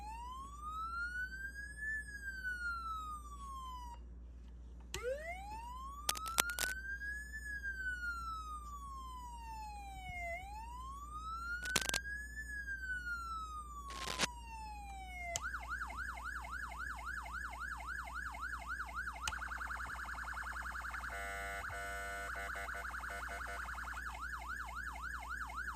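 Cable scratch noise breaks in three times: 6.09 to 6.72 s, 11.63 to 11.99 s and 13.89 to 14.25 s. Each burst is a dense, uneven rustle sitting somewhat louder than the sound itself. A worn cable or connector being moved is the likely cause.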